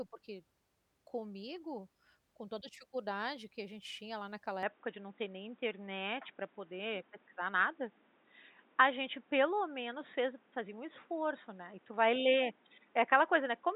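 At 4.63 s the speech abruptly turns dull and boxy, and stays that way to the end. There is no gap at the change. Nothing above 3.8 kHz survives from that point, so the brightness and sibilance vanish. The level shifts by about 5 dB, and a new background noise sits roughly 35 dB under the speech. The likely cause is the input switched to a poorer device mid-recording, such as another microphone or a headset's call profile.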